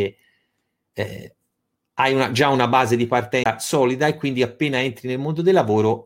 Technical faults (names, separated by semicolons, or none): CD skip